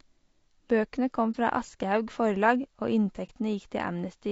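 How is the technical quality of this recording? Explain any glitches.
The technical quality is compromised: the speech sounds rough and grainy throughout, and two brief dropouts interrupt it.

Low-delay AAC compression: the graininess runs the whole clip, with noise filling the gaps between voice harmonics and a thin, synthetic-sounding top band. This likely comes from AAC-ELD coding, whose short frames resolve pitch poorly and fit a bitrate around 32 kbps.

AAC frame loss with muting: at 1.31 to 1.36 s and again at 3.26 to 3.30 s the sound fades into a brief dip of about 30 ms. Each gap points to a single lost frame that the decoder replaced with silence, with overlapping windows smoothing the edges.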